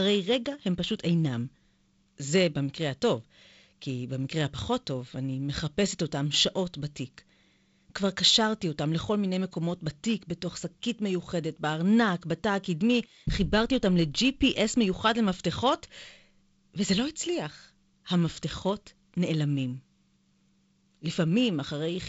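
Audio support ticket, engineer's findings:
No faults found in this speech recording. The G.722 wideband path is working as designed: the band stops at 7.7 kHz, and there is a light coding hiss whose lower-band texture fits the 48 kbit/s mode.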